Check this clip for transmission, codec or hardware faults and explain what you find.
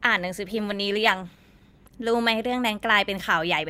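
One transmission fault is present, a call bitrate drop. It runs from 0.59 s to 2.01 s, and the sound is at its worst for about 1.33 s. The call's bandwidth estimate fell, so the encoder had to spend far fewer bits. Coding turns coarse, and the top of the spectrum is cut away. The speech sounds muffled, rough and watery. It clears once the rate recovers. This fits a fall from 64 kbps to roughly 18 kbps.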